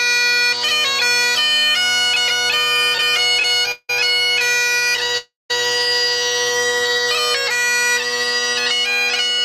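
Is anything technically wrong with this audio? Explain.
Yes. There are two kinds of network-delivery fault, both concentrated between about 2.6 and 5.5 s.

Repeated stalls (stutter) occur from 2.58 to 3.90 s and again from 4.51 to 5.15 s. Audio packets arrived late or more slowly than playback consumed them, so the jitter buffer kept running dry. Each time, the receiver stretched the last bit of sound until more data came. The first stretch has 25 such holds covering about 0.4 s, roughly 30% of that span, with the longest lasting 173 ms. The second has 14 shorter ones, none over 16 ms, totalling 133 ms. Nothing is lost, but the audio drags and hiccups in a rapid, uneven stammer.

A call audio freeze follows immediately, from 5.18 to 5.51 s. Here the last sound is held and smeared into a fading buzz or hiss for 322 ms, of which about 180 ms decays to silence. Then the audio resumes exactly where it stopped, so about a third of a second has been inserted and playback is now running that much behind. 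The likely cause is packets held up in transit long enough to empty the buffer entirely.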